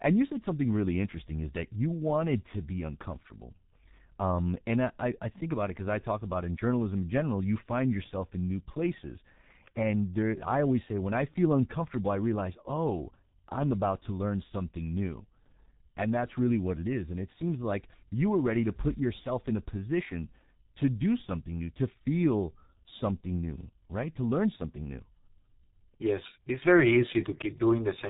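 Speech coded throughout with the G.723.1 codec, at a low rate that fits about 6.3 kbit/s, working in long 30 ms frames with a slowly updated voice model. Nothing reaches above about 3.8 kHz, so the voice is heavily muffled and hoarse, with smeared consonants.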